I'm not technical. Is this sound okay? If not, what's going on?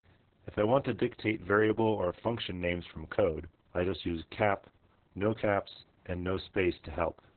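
No. The speech sounds muffled, hoarse and a little robotic throughout, from heavy Opus voice compression squeezing it hard and discarding everything above roughly 4 kHz.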